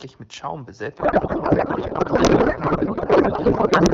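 A codec payload misread begins at 0.97 s and runs to the end of the clip. The AMR wideband frames appear to have been packed in octet-aligned form but decoded as bandwidth-efficient, so every field is read from the wrong bit position. The speech collapses into garbled noise and warbling that barely tracks it. Before that point the wideband speech is clear, which fits AMR-WB at around 12.65 kbit/s.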